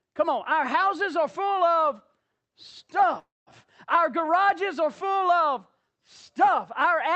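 A speech clip that passed through a call codec, with the high end stopping near 8 kHz, which fits Opus at about 32 kbps. Between 3.19 and 3.50 s there is a call audio freeze: the last sound is stretched into a fading fill that ends in about 200 ms of silence, and then the speech picks up exactly where it stopped. The likely cause is packets held up in transit, which left the jitter buffer empty for about 273 ms. Unlike a packet-loss dropout, nothing is skipped. A gap is inserted instead, and everything after it arrives that much later.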